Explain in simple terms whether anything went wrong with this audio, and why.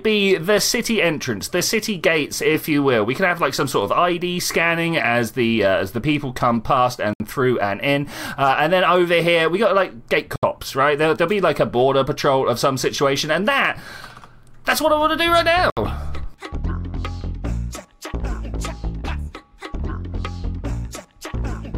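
Three short silences cut into the sound, at 7.13, 10.36 and 15.70 seconds. Each lasts about 70 milliseconds. This is a gap at a join of encoded pieces. Separately compressed sections were stuck together, and each one's padding of silence stayed in.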